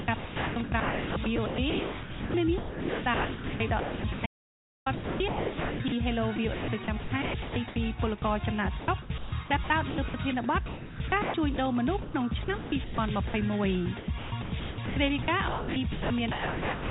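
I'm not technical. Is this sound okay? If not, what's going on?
No, there are two problems in this sound.

The first is sound chopped by the voice detector, and it runs through almost the whole clip: 0 to 8.22 s, 8.8 to 10.14 s, 10.66 to 13.34 s, and 13.98 s to the end. A voice detector decides moment to moment whether there is anything worth sending. Here it keeps switching off, most likely because it judged quieter parts to be silence, and swaps them for generated background hiss. About 5 seconds are replaced in the first stretch, and between half a second and 1.7 seconds in each later one. The result is choppy, with holes where parts of the sound are missing.

The second is an audio dropout to silence from 4.26 to 4.86 s, lasting 0.6 s. The signal vanishes completely, with no background noise at all, then returns. The likely cause is a brief loss of the input, such as a connection hiccup or momentary mute, while recording carried on. 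Whatever happened in that gap is gone.

The dull, telephone-like tone, with nothing above 4 kHz, comes from the call line itself and is expected.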